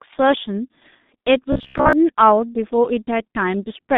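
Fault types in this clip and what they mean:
G.723.1 codec: a low-rate telephony codec coding speech in 30 ms frames at roughly 6.3 kbit/s, which leaves this speech muffled and hoarse with smeared consonants throughout; a spectrogram shows nothing above about 3.7 kHz, the energy confined to a narrow phone band.
Robotic sound from repeated short buffers: from 1.53 to 1.93 s the speech collapses into a stiff metallic buzz near 66.8 Hz, likely from a stalled stream padded by looping the last short chunk; the waveform shows roughly repeating cycles, the spectrogram evenly spaced harmonic lines.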